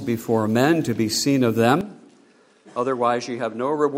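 At 1.81 s the recording likely switched its input to a poorer device, and it stays on it to the end. Everything above 10.6 kHz disappears, so the sound turns duller from that instant. The change is abrupt, with no silence at the switch. The level drops by about 5 dB, and a faint new background noise appears, around 50 dB below the signal.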